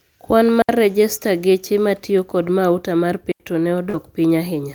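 At 0.62 s the digital wireless link lost too much data for the receiver to decode, so the receiver muted its output for about 70 ms, until 0.69 s. The speech drops into a clean hole of near silence that opens and closes with a very quick fade. No burst of noise or crackle comes before or after it. The same digital wireless dropout returns at 3.32 s and mutes for about 84 ms, to 3.40 s, again as a tidy silent gap.

From 3.89 s to 3.95 s about 40 ms of the call never reached the decoder in time. This is a short concealed packet loss. The decoder filled the hole by carrying the last stretch of speech forward, extending its pitch where the sound was voiced and using shaped noise where it wasn't, then blended back into the real signal. The speech briefly smears and wobbles rather than stopping.

The last 20 ms of that stretch, from 3.93 s to 3.95 s, was not guessed. It was lost packet rebuilt from error correction. 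The following packet carried a low-bitrate backup copy of the missing audio, and the decoder played that copy instead. The sound there has no gap but turns rougher and noisier for a moment, which fits a single lost packet recovered this way.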